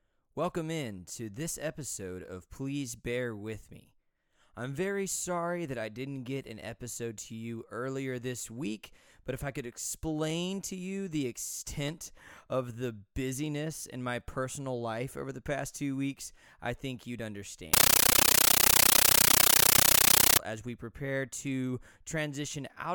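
From 17.74 to 20.39 s the speech gives way to harsh, very loud chattering static: a compressed stream played as audio, with undecoded Dolby Digital data treated as samples. Unlike random noise bursts, it pulses steadily at 31.25 Hz, with 13.3 ms bursts and silent gaps, which fits a 640 kbps AC-3 stream.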